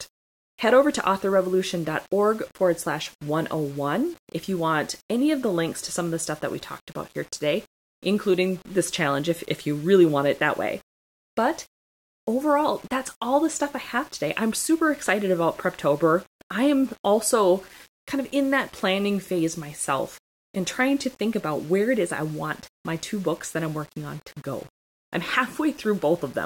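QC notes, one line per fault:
Throughout: low bit depth without dither. The speech has a grainy, gritty edge that moves with the sound itself, worst on the quiet tails and soft consonants, where it roughens up or sputters out to silence between steps. It sounds like the signal was likely squeezed down to about 7 bits and simply rounded with no dither, so the error tracks the signal and sits only about 30 dB under it.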